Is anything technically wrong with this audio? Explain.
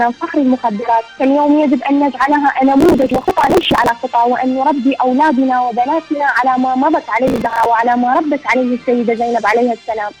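Yes: processor overload crackle at 2.81–3.89 s and 7.27–7.66 s. The processor misses many buffer deadlines of a few milliseconds in a row, skipping each one, so a gritty tearing crackle rides on the sound. The waveform shows dense hard-edged gaps, and the spectrogram shows vertical broadband streaks.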